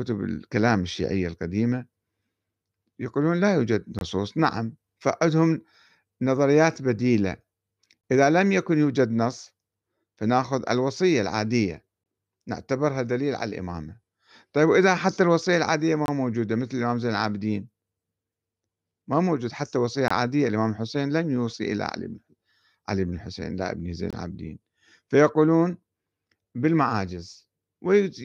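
At 3.99, 8.01, 12.04, 16.06, 20.08 and 24.11 s the speech drops out for about 23 ms each time, a gap between chunks. The audio was delivered in 4 s segments, and silence was inserted at every join rather than the segments butting together. Nothing is missing from the speech itself, but each join is heard as a short hole recurring at a steady 4 s rhythm.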